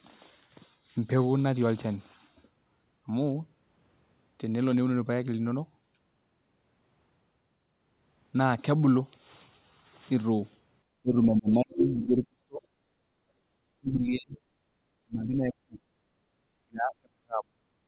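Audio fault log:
11.02–12.65 s, 13.56–14.37 s, 14.98–15.78 s, 16.57–17.84 s: speech suppressed in double talk. The talker's speech sinks by roughly 30 to 40 dB. The likely cause is both sides talking at once: the echo canceller could not separate the talker from the loudspeaker echo and attenuated both.
11.8–12.28 s: other side's voice leaking through. A second voice, about 5 dB below the talker, comes through during the overlap. This is likely far-end loudspeaker sound that the echo canceller failed to remove from the microphone.
13.06–13.28 s, 14.65–14.70 s, 16.06–16.29 s: background gated by the echo canceller. The room sound drops by about 7, 10 and 8 dB respectively for 0.05 to 0.23 s. The canceller clamps the microphone hard while the loudspeaker plays, then releases it, and the background returns.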